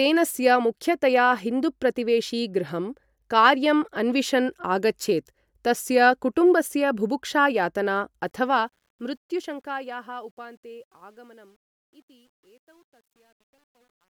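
A fade stage keeping too few bits with no dither is behind the truncation distortion on the fade-out at the end of this speech clip. The fade starts around 8 s and runs to the end at 14.2 s, but from 8.21 s the falling level is quantised in coarse steps, which fits a 10-bit stage. From 10.13 s to 14.16 s the quiet tail turns gritty.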